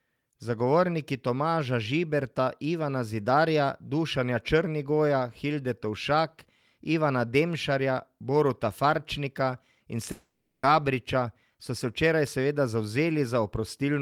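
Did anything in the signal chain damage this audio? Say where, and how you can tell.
Yes, at the network stage. From 10.11 to 10.65 s the speech turns into a fading buzz, then goes silent for about 150 ms, and resumes with 520 ms of audio gone. This is likely a long network dropout: the receiver stretched the last received sound across the gap before giving up.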